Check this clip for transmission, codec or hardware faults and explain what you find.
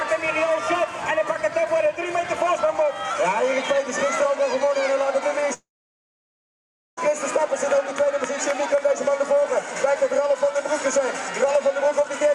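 There's one clear fault: a long network dropout from 5.53 to 6.99 s. Right at 5.53 s the last bit of sound gets stretched into a short, fading buzz, which is the receiver papering over missing audio. That gives out after about a tenth of a second, leaving roughly 1.3 s of silence. The sound then resumes at 6.99 s with about 1.4 s simply gone. The likely cause is a stall in the stream where packets stopped arriving and were never recovered.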